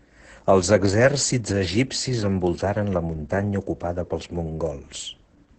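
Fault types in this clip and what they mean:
Opus voice compression: the speech has been through a low-rate linear-prediction voice coder, and the damage is heavy. Nothing is present above about 8.8 kHz, which fits wideband SILK coding, and the excitation is coded coarsely, so the speech sounds muffled, hoarse and slightly robotic throughout. The degree of roughness points to a bitrate around 10 kbps, with the codec working in 20 ms frames.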